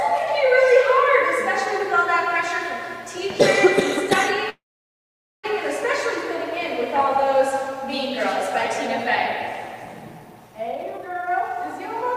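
At 4.49 s a call audio freeze begins and lasts until 5.46 s. The last sound is carried on briefly as a fading buzz or hiss, then about 0.85 s of silence follows. Delayed packets likely emptied the jitter buffer. Nothing is lost. The audio resumes where it stopped, now 0.94 s later.

From 10.71 s to 11.84 s there is a jitter buffer speed-up. The receiver trims many short pitch-period pieces in a row to shrink its backlog, roughly 0.7 s in all. Playback runs at about 161 percent speed with unchanged pitch, so it sounds hurried.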